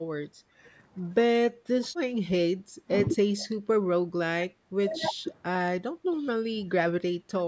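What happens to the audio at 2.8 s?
Background gated by the echo canceller: from 2.62 to 2.86 s the canceller pulls the microphone down about 12 dB, so room tone dips briefly, showing as a faint band and shrunken waveform.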